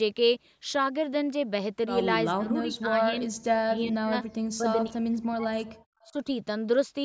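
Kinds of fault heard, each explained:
Speech suppressed in double talk: the speech dips at 2.35–2.98, 3.59–4.14, 4.53–4.68, 4.86–5.57 and 6.06–6.29 s, by up to about 40 dB, shallower in the first and last. This is likely an echo canceller turning both talkers down.
Echo leak: faint, brief scraps of a delayed copy appear at 5.80 and 6.01 s, each about 50 ms long, about 35 dB below the speech and trailing it by 387 ms. This is likely loudspeaker sound getting past the canceller. Unlike room reverb, it is a distinct late repeat rather than a smooth decay.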